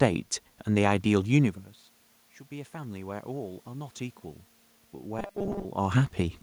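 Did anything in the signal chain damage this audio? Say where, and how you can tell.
Yes. From 2.48 to 4.02 s there is automatic gain rising, introduced in the call-processing stage. The input level drops by about 17 dB, and the gain control responds by lifting its gain about 4 dB over roughly a second and a half. You can tell it is processing rather than acoustics because the voice and the room noise swell together. A talker changing position would move only the voice.

From 5.19 to 5.65 s there is a robotic sound from repeated short buffers, at the driver or buffer stage. The speech collapses into a rigid metallic buzz at 200 Hz that still loosely tracks the syllables. The likely cause is buffer starvation. When new audio arrives too late, the last 5 ms segment gets replayed, which fits a 5 ms buffer. About half the real signal is skipped, and the fixed 200 Hz repetition rate imposes the buzz.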